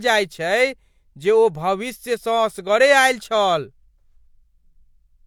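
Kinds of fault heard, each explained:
No technical faults can be heard in this speech recording. There is nothing to list or explain for it.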